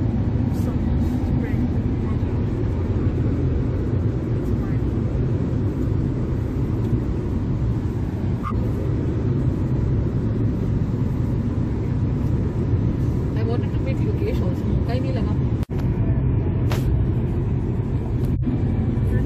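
Corrupt frame decoded at 8.44 to 8.52 s and 18.34 to 18.43 s: damaged compressed frames, a few each time, were played anyway, throwing misplaced energy peaking around -15 dBFS, heard as a brief chirp, squeak, blip or burst of noise.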